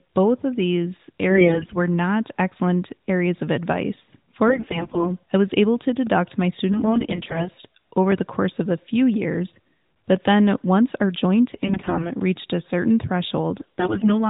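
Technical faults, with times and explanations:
1.30–1.76 s, 4.48–5.10 s, 6.72–7.49 s, 11.54–12.11 s, 13.60–14.20 s: AMR bit errors. Speech turns hoarse, scratchy and gargly while pitch and level hold, because flipped weakly protected bits misplace excitation pulses and skew gain.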